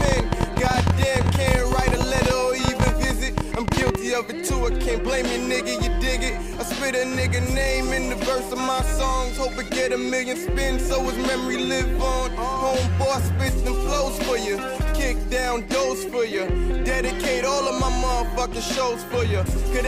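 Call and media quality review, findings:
Train of clicks, 0.01–3.96 s: likely interference pickup or a faulty connection or power supply injecting repeated pulses. Around fifty similar clicks at roughly 14.5 per second, irregularly spaced, peaking well above the signal; audible as uneven ticking over the sound and in gaps.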